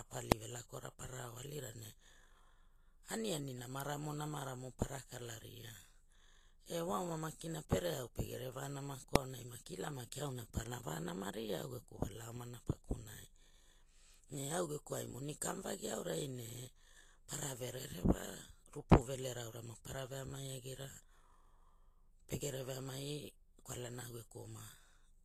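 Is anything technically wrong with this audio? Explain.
Yes, there are two problems: codec damage across the whole clip and two isolated clicks.

Vorbis compression is the likely cause of the damage heard throughout the speech. Nothing is present above 14.2 kHz, and the codec damage is plainly audible, which points to a low bitrate of around 35 kbps. At that rate the encoder models a smooth spectral envelope and quantises the residue so coarsely that treble detail is replaced by noise of similar energy. The result is a hissy, grainy treble, roughened tonal components and smeared consonant onsets.

Invalid numbers at full scale occur twice, at 0.32 s and at 9.16 s, just before "aonai maki ila maki". In each case a computation returned infinite or invalid values, and the output was pinned to a single extreme value far from zero for about 0.67 ms, which fits a 32-sample block. Because the block is so short, each event is heard as one sharp bang rather than two separate pops.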